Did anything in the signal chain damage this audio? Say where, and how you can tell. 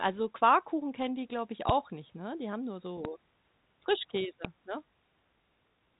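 Yes. Three loud pops, each a single sharp click roughly 20 dB above the speech and lasting about 25 ms, land at 1.69 s (between "kennen die glaube ich" and "nicht ne"), 3.05 s (after "haben nur") and 4.45 s. The speech runs on unbroken beneath them over the 3.8 kHz-limited codec band. That points to a likely voltage step or glitch in the analogue wiring or driver stage.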